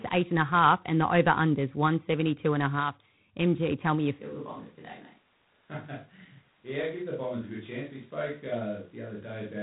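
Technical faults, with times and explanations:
Throughout, G.726 ADPCM: the speech is coded at 24 kbit/s with few bits per sample, adding a harsh, level-following rasping hiss and removing everything above 3.9 kHz.
4.21 s to end, switch to a distant microphone: likely a failed close microphone after "tell me you", so speech turns suddenly roomy, thinner and about 10 dB quieter, with more background noise.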